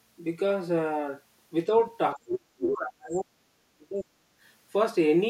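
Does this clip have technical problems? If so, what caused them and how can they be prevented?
Yes. From 2.16 to 4.15 s the speech drops away, by about 40 dB at worst. This is speech suppressed in double talk. The echo canceller likely mistook the talker for echo while both sides spoke, and turned everything down. Headphones or better double-talk detection would prevent it.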